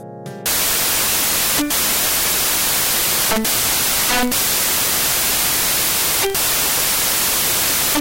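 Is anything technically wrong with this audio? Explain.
Yes. From 0.46 s to the end, samples built from the wrong bytes turn the sound into loud, harsh broadband noise. Misassembled bytes make the rapidly changing low bits dominate each value. The waveform becomes a dense block, and the spectrogram shows flat broadband energy.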